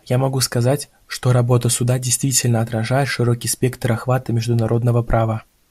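Nothing goes wrong anywhere in this speech recording, so there's no fault to walk through at any point along the way.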